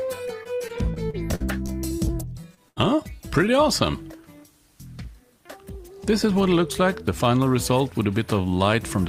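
Repeated packet loss (robotic sound) runs from 0.43 to 1.70 s: seven short holes, the longest 47 ms, are patched by extending the previous sound, giving choppy audio with smeared, copied-looking stretches on a spectrogram. Short concealed packet loss follows at 2.41–2.45 s and 2.55–2.59 s, each a brief smear or wobble where a few hundredths of a second were synthesised, visible as small blurred patches. A burst of packet loss at 2.69–2.78 s loses about 80 ms; the last sound is held and faded, so the waveform shows a decaying repeated segment before the audio resumes further along.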